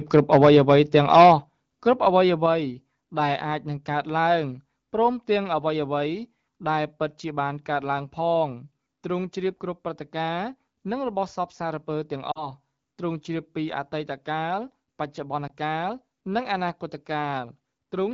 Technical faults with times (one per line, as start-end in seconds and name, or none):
0.14-1.33 microphone overload
0.45 microphone volume stepped down
1.44 microphone volume stepped down
2.46 microphone volume stepped down
12.32-12.50 lost AMR speech frames
15.47-15.51 lost AMR speech frames